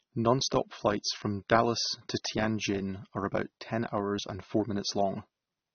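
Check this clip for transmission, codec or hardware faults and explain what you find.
A codec fault runs throughout the speech. Likely AAC compression at a low bitrate, roughly 24 kbps, quantising coarsely and discarding everything above 6.3 kHz, leaving the audio dull, smeared and plainly warbly.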